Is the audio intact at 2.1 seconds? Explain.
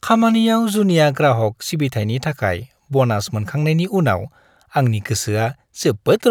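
Yes, the speech at 2.1 seconds is intact, with no audible fault at that moment.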